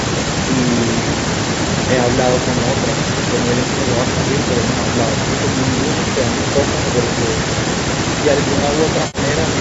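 Speech, with an echo and no canceller running through the whole clip. The far end plays the call on a loudspeaker, and its microphone sends it back unremoved. Every phrase returns around 300 ms later, about 16 dB quieter and thinner. Near the end, from 9.07 to 9.18 s, there is AAC frame loss with concealment. About 70 ms of audio went missing. The decoder filled the gap from the last good spectrum, leaving a brief smeared, noisy or phasey patch. The top is limited to 8 kHz by the call's microphone processing.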